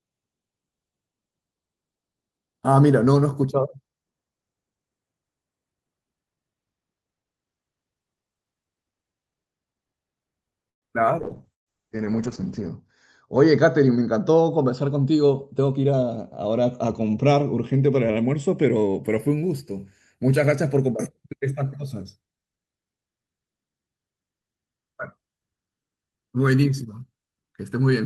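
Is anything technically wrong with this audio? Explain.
Yes, this speech has four call-transmission faults clustered in the middle section.

Call audio freeze, 10.69 to 10.85 s. The speech stops for about 125 ms and is mostly silent for about 120 ms before resuming from exactly where it stopped. The likely cause is packets held up in transit until the jitter buffer ran dry. The receiver briefly extended the last sound and then faded to silence. Nothing is lost, but a gap is inserted and the call's delay grows by 125 ms.

Call bitrate drop, 11.22 to 19.09 s. The encoder was pushed from 32 kbps down to 8 kbps after the bandwidth estimate fell, and stayed at its lowest for 1.5 s. With so few bits, Opus codes the speech coarsely and narrows the audio band from 20 kHz to 8 kHz. The voice sounds rough, watery and dull, losing its crisp top end until the rate recovers.

Burst of packet loss, 11.54 to 11.69 s, inside the low-bitrate stretch. 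About 120 ms of audio never arrived in time. The receiver held the last sound briefly, then let it fade, leaving about 110 ms near-silent. Unlike the freeze, the speech picks up further along, so that stretch of speech is simply missing.

Jitter buffer speed-up, 14.91 to 16.18 s. The buffer was holding more audio than its target, so the receiver trimmed short pitch-period slices repeatedly, roughly 150 ms in total. The speech plays at about 109% speed while the pitch stays unchanged. The result is a hurried, slightly compressed delivery rather than a higher voice.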